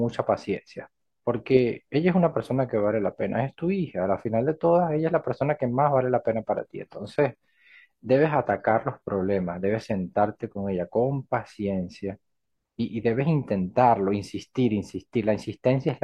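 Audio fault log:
6.61–10.61 s adaptive stream at a lower bitrate: abrupt switch to a far lower-bitrate stream makes treble synthetic; spectrogram's upper band looks copied from lower bands, waveform unbroken.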